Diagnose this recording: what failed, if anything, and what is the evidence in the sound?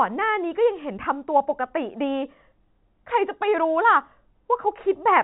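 Nothing in this recording has failed at any stage. It has passed through a working G.711 telephone coding path, which cuts off everything above 4 kHz and leaves only a faint quantisation noise that follows the level of the speech.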